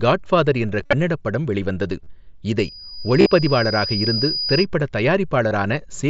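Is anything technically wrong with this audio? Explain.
Yes, the speech has two faults: concealed Bluetooth headset packet loss at four points and a loudspeaker feedback squeal in the middle. The wideband mSBC headset link carrying it stays at its 8 kHz bandwidth with light graininess on loud syllables.

Concealed Bluetooth headset packet loss appears at 0.81–0.93 s, 2.04–2.07 s, 3.20–3.26 s and 5.49 s. Audio packets from the headset failed to arrive, and the receiver covered each gap by repeating the closest-matching recent stretch of waveform. The first event loses about 80 ms scattered over 120 ms, with a longest run near 50 ms, and is heard as a brief buzzy, held tone with a slight warble as real speech resumes. The third, about 50 ms within 60 ms, sounds similar. The other two gaps are shorter, at 30 ms and 15 ms.

The loudspeaker feedback squeal runs from 2.58 to 4.66 s. The microphone picks up its own loudspeaker output, and at 4.9 kHz the loop gain exceeds unity, so that frequency recirculates and grows on its own. 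It swells over about a second and a half into a piercing, steady high whistle at roughly the same loudness as the speech, then stops at 4.66 s.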